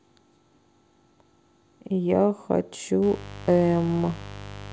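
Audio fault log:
3.03–4.72 s, mains buzz: 50 Hz switching spikes bring a raspy edge, roughly 15 dB under the speech, with harmonics into kilohertz, unlike smooth, dull hum.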